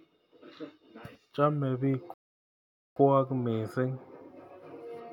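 A rebuffering stall interrupts this speech clip from 2.14 s to 2.96 s. The player exhausted its store of downloaded audio and stopped outright, so the sound drops to silence for about 0.82 s. It then picks up at exactly the point where it stopped once more data arrived. No speech is skipped or repeated, but the gap adds 0.82 s to the running time and breaks the natural pacing.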